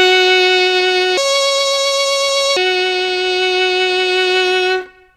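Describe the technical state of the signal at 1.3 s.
A section at the wrong speed runs from 1.17 s to 2.57 s, so at 1.3 s the music is playing 1.5 times faster than it was recorded. This is likely the result of the passage being played or rendered against the wrong clock, so speed and pitch rise together. The music jumps up by roughly seven semitones, close to a fifth, and sounds hurried and bright until it drops back to normal at 2.57 s.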